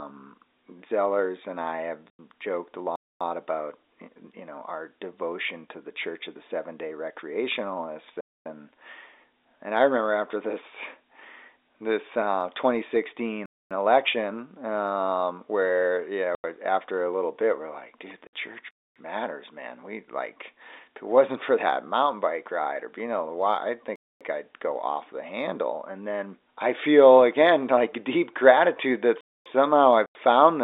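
At 2.10 to 2.19 s the speech drops out abruptly. This is packet loss filled with silence: the receiver substituted dead air for missing packets. The 90 ms hole fits three lost 30 ms packets. It recurs at 16.35 to 16.44 s, 18.27 to 18.33 s (60 ms, about two packets) and 30.06 to 30.15 s.

Starting at 2.96 s, quarter-second holes interrupt the speech at a steady beat: 2.96, 8.21, 13.46, 18.71, 23.96 and 29.21 s, each 250 ms. This is a gap between chunks. The audio arrived in 5 s pieces, and silence was inserted at each join, so nothing is missing but the flow stops. Through all of this the G.711 telephone coding keeps its narrow 300 Hz to 3.7 kHz line band.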